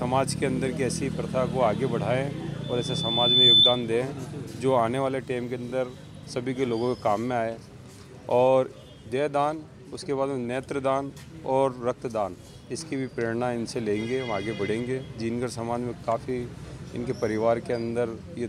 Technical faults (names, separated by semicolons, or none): loudspeaker feedback squeal; lost LE Audio frames